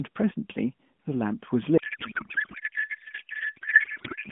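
Up to about 1.78 s the speech comes through as a narrowband AMR call, thin and band-limited the way the mobile codec makes it, with the light coding that fits a 12.2 kbps mode. At 1.78 s a codec payload misread sets in and runs to the end at 4.32 s. The frames look like octet-aligned AMR being unpacked as bandwidth-efficient, so every field lands in the wrong spot, and the speech turns into garbled, warbling noise that barely tracks it.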